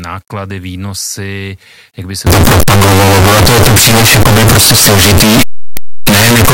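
At 2.27 s the speech abruptly turns into very loud, harsh distortion that lasts to the end of the clip, with quiet moments as loud as everything else. The likely cause is signed and unsigned mixed up: with the top bit flipped, which fits 8-bit samples, every zero crossing becomes a full-range jump. On the waveform the trace turns into dense, large swings from that point, and the spectrogram shows dense broadband energy.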